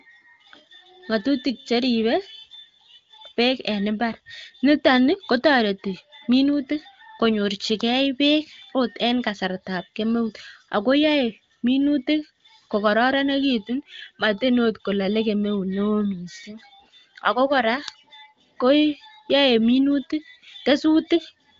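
Speech carried over the AMR wideband (HD Voice) codec at 23.05 kbit/s, with nothing above 7 kHz and any coding damage faint at most, and no technical faults to report.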